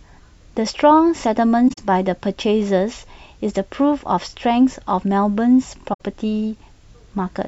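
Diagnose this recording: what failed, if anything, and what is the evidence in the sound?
Corrupt frame concealed at 1.68–1.78 s and 5.93–6.01 s, a codec-stage fault. The spans of about 0.1 s and 0.08 s fit four and three damaged AAC frames that the decoder detected and covered with muting or a scrambled spectrum.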